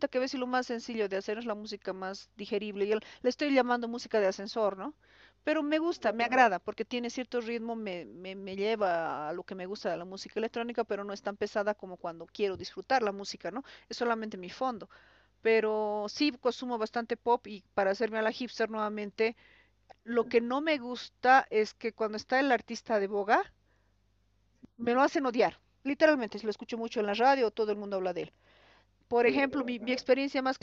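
No technical faults are audible.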